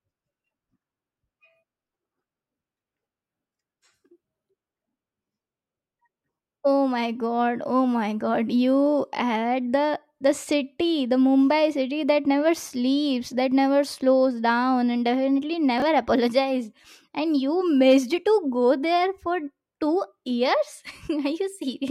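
A speech clip with one fault: chunks out of order, from 15.78 to 15.82 s, right after "slows down and definitely". Over those 40 ms, two short pieces of audio play swapped. A 20 ms chunk arrived one chunk late and plays after the chunk that should follow it. Nothing is missing, but the order is wrong. The three hard joins where the pieces meet give a brief jumbled stutter.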